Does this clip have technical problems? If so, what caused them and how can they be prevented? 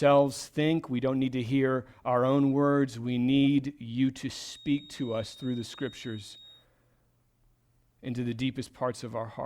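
Yes. From 4.31 to 6.67 s a thin 3.7 kHz feedback whistle sits well below the speech, likely from a speaker-to-microphone loop held just short of runaway. Its slow swelling and fading in level sets it apart from a fixed test tone or electrical whine. Lowering monitor gain, moving the microphone away from loudspeakers, or notching 3.7 kHz prevents it.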